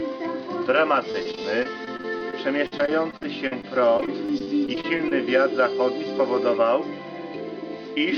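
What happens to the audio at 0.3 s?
Nothing goes wrong at 0.3 s: the audio passes intact through the call path there, with only the ordinary coding of that connection and no fault.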